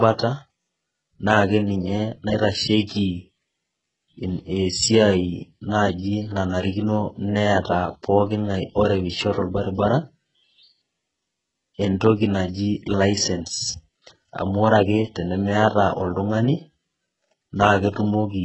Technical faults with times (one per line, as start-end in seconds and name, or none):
0.00-18.44 HE-AAC compression